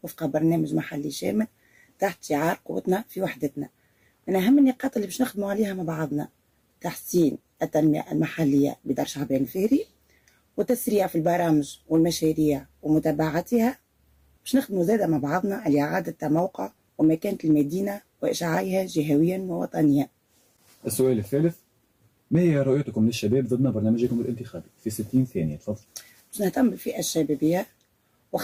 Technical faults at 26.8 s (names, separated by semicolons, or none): none